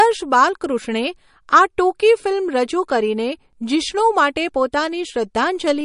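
The speech has a watery, swirly quality throughout, with nothing heard above about 10.6 kHz and plainly audible smearing on attacks and metallic chirps on s sounds. The likely cause is MP3 compression at a low bitrate, around 41 kbps, where the encoder cuts the treble and lets weak frequency lines flicker on and off between frames.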